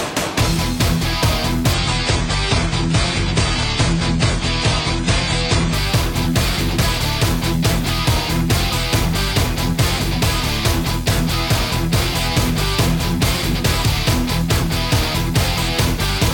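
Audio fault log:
1.74–5.74 s, adaptive stream at a lower bitrate: quality drops abruptly with no gap, nothing remains above 9.7 kHz, and codec artefacts rise, which fits a switch to about 24 kbit/s.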